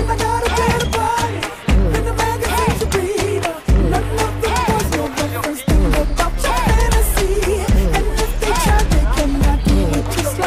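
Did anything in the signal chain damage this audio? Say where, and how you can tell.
No, nothing in the signal chain damaged this audio.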